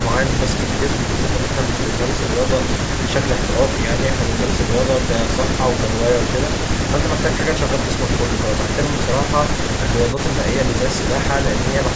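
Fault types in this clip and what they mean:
There are no fault types in this clip to explain; the call microphone processing it passed through, which trims the lowest bass and leaves nothing above 8 kHz, is normal.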